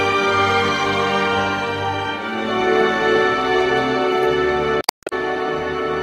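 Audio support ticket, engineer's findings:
Damaged data in the compressed stream, 4.80–5.13 s: corrupt frames misdecoded and decoder sync lost until the next frame header. Audible as a chirp, squawk, click or short hole.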